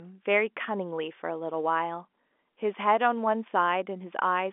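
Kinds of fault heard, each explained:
The speech comes over an ordinary G.711 A-law telephone path at 64 kbps, with its content held to the 250 Hz to 3.5 kHz line band and nothing above 3.8 kHz, and no faults are present.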